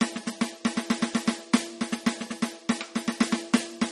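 From start to finish the music is capped at 13.7 kHz, with a watery, swirly shimmer and plainly audible codec damage. That's likely MP3 compression starved of bits, around 32 kbps: the encoder drops the treble and lets weak frequency lines flicker between frames.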